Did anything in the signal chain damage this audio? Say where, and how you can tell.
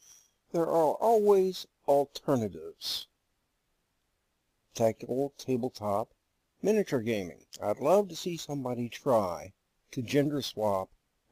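Yes. The damage happened at the converter, as sample clock jitter present for the whole clip. A noisy roughness rides on the audio throughout. It grows with louder and brighter passages and drops away in the quiet gaps, which points to timing error rather than ordinary background noise. The sampling clock wanders by around 10 µs rms, so each sample is captured slightly early or late. Steep waveform slopes turn that timing error into an amplitude error roughly 25 dB below the signal.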